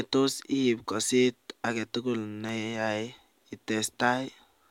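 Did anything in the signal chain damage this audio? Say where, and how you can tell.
Yes. Sharp single clicks at 1.00 s and 2.49 s in the speech are dropped samples. Each shows as a thin vertical line across the spectrum where the waveform jumps straight to a later value. Only a fraction of a millisecond goes missing each time, likely lost at the driver or buffer stage.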